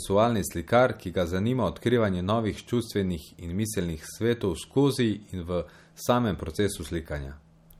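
It's a speech clip with plainly audible damage throughout: a watery, swirly texture and nothing above 18.5 kHz, likely from MP3 compression at a low bitrate around 50 kbps.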